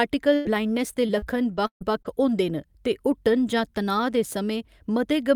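From 0.35 to 0.48 s, just before "ब्लाइंडनेस दे", there is a burst of packet loss. Several consecutive packets never arrived in time, so the receiver stretched the last sound across roughly 94 ms, letting it decay. It sounds like a brief frozen sound sinking away, and then the audio jumps ahead with about 100 ms missing. A spectrogram shows the last sound's pattern held and fading, followed by an abrupt restart.

Inside that stretch, from 0.45 to 0.47 s, one 20 ms frame is a lost packet rebuilt from error correction. The packet that followed carried a low-bitrate copy of it, which the decoder played, so this frame is not a gap. It comes through coarser and noisier than the surrounding audio. On a spectrogram it appears as a single thin column with smeared, grainier detail rather than a blank or a smooth fade.

From 1.07 to 2.07 s, right after "ब्लाइंडनेस दे", repeated packet loss gives the sound a choppy quality. 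Five separate gaps fall within this second, the longest about 135 ms. Roughly a fifth of the span is concealment, about 223 ms in all, and about 70 ms of it was roughly rebuilt. About 240 ms is lost outright. The waveform shows repeated dips and flattened patches, and the spectrogram shows a stuttering series of frozen segments.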